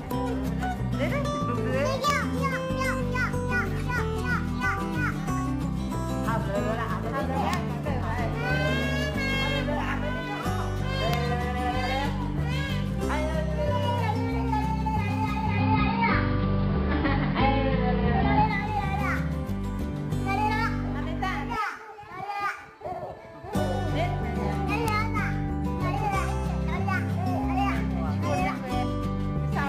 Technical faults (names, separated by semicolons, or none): integer overflow; digital radio blending to analogue